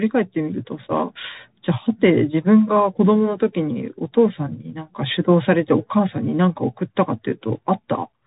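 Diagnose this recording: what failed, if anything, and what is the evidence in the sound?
Codec stage: the speech went through a Bluetooth CVSD headset codec, which fits a 64 kbps link. Nothing above 3.8 kHz survives, and coarse one-bit adaptive steps leave grainy distortion throughout.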